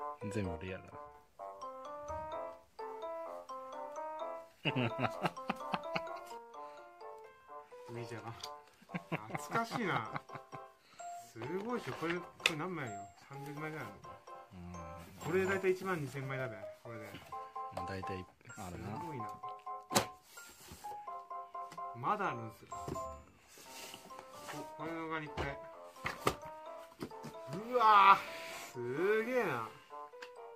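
The level falls abruptly by about 6 dB from 0.56 to 1.15 s, then again from 6.38 s to the end. These are likely one channel drops out events, where one stereo side goes silent and the mono sum loses half its shared signal.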